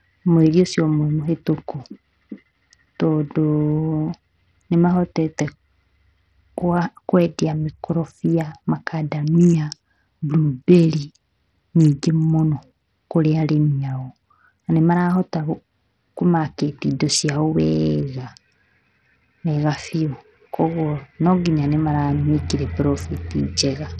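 A speech recording, about 24 seconds long, with treble that thins and flickers from start to finish, a gritty grain throughout, and aliasing riding on the sound. The heavy damage most likely comes from Bluetooth SBC compression at a starved setting, one that fits roughly 64 kbps. Its small bit pool leaves the upper sub-bands with too few bits to hold steady and quantises the remaining bands coarsely, producing the grit.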